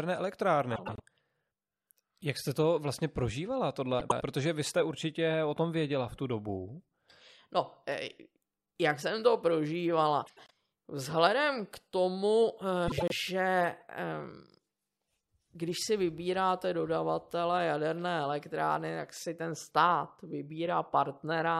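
A garbled flutter interrupts the speech at 0.75–1.00 s, at 3.99–4.22 s between "jste to vlastně prožívala" and "vy jste určitě o", at 10.26–10.50 s after "jak jsem to prožívala", and at 12.88–13.12 s. These are frames out of order: two neighbouring blocks of about 0.1 s each were decoded in swapped order, which fits runs of four frames. No time is lost.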